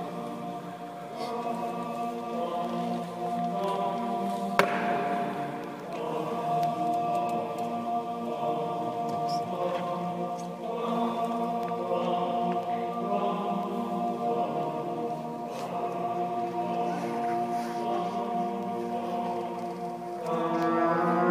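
Periodic USB or driver dropouts recur once per second from 0.64 s to 20.6 s, about twenty in all. Each time the audio path stalls, a tiny fraction of a millisecond is replaced by silence, heard as a regular tick against the signal.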